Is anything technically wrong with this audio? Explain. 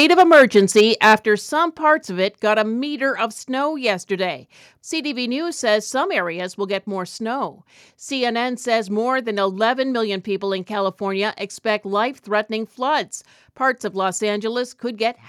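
Yes. The speech has two related problems at the very start.

From 0.0 to 1.14 s there is microphone overload. The loudest syllables carry a harsh, crackling edge because the waveform peaks are flattened, about 6 dB beyond what the converter could hold, with a few percent of the samples sitting at the ceiling. The likely cause is an input gain set too high. Unlike codec distortion, the grit appears only on peaks and vanishes between them.

The microphone volume is stepped down three times: at 0.22 s by about 2 dB, at 1.23 s by about 6 dB, and at 2.25 s by about 2 dB. Speech and background fall together in a single instant, which is most likely call software cutting the device's input volume in response to the overload. A gate or noise suppressor would dip only the background or swell back up afterwards, but these drops are abrupt and they stay down.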